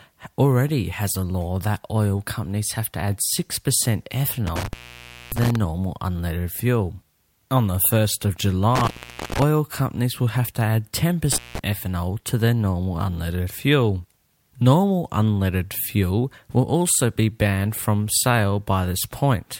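Three intermittent contact dropouts in the speech, at 4.47 to 5.56 s just before "unleaded fuel", 8.75 to 9.43 s before "companies will have to", and 11.32 to 11.59 s. A loose connection briefly opens, cutting the signal for roughly 0.59, 0.46 and 0.17 s, with crackle at each edge.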